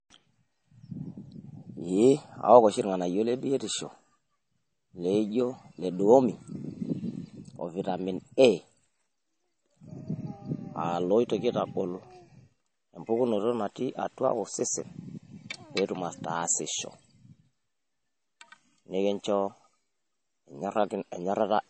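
Speech with plainly audible damage throughout and nothing above 8.4 kHz, which points to heavy MP3 compression, likely at a low bitrate around 32 kbps.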